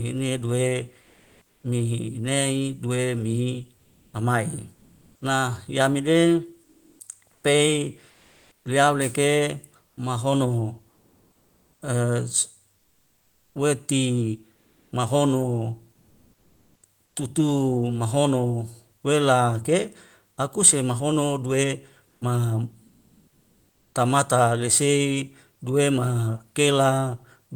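At 1.01 s, just after "du e", the real background gives way to comfort noise until 1.63 s. This likely comes from discontinuous transmission in the Opus codec, which stops sending during pauses. The receiver fills about 620 ms with smooth synthetic hiss. That hiss sits about 5 dB quieter than the true room sound, which was about 44 dB below the loudest speech. The texture of the room vanishes.

Inside that gap, the voice detector likely clips the onset. It is late to notice speech restarting. About 120 ms, from 1.51 s to 1.63 s, is never sent. The next syllable starts abruptly, with no soft attack.

After "dua mihi", the background turns featureless again from 3.77 s to 5.21 s. About 820 ms of that stretch is synthetic fill.

From 6.63 s to 17.15 s, the voice detector likely chops the sound. It toggles repeatedly between sending and muting. About 4.1 s in total is swapped for fill. Quiet syllables and word edges drop out. 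The speech turns choppy.

Between "se ma hono due" and "kabamata lesei", comfort noise returns from 22.07 s to 23.93 s. About 1.2 s of genuine background is replaced by steady, lifeless hiss.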